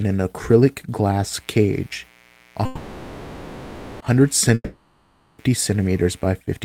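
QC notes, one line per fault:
1.26–6.30 s, mains buzz: a raspy 60 Hz buzz enters right after "an acrylic" and sits around 35 dB below the speech. Sharp switching spikes carry harmonics into the kilohertz range, which is what separates it from a smooth, low hum.
2.65–4.03 s, call audio freeze: the last sound is held and fades for about 1.35 s, then speech resumes exactly where it stopped. Nothing is lost, and everything after arrives 1.35 s late. The likely cause is an emptied jitter buffer waiting for delayed packets.
4.54–5.50 s, long network dropout: the last sound is stretched and decays, with about 30 ms of silence. Speech then returns further along, with roughly 0.84 s of audio missing. Unlike the freeze, material is lost, and the likely cause is packets that never arrived.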